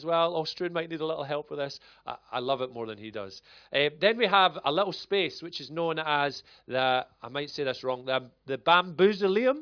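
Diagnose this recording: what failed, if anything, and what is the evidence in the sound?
Listening through the speech recording, nothing stood out as a fault at any stage of the chain.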